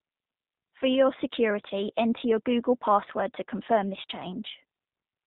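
Throughout, the speech sounds band-limited, slightly rough and synthetic, with nothing above 4 kHz and a plainly audible coded quality. That is the G.729 codec, which fits its 8 kbit/s mode: the decoder rebuilds each 10 ms frame from a vocal-tract filter, a pitch predictor and a few pulses.

From 1.68 to 1.72 s, just before "enter your", the speech briefly smears into a buzzy tone or coloured noise that fades, then returns weak or distorted before recovering. This is VoIP packet loss concealed by the speech codec. About 20 ms of audio went missing, which fits two lost frames, and the decoder filled the gap by extending its last pitch and filter at falling gain.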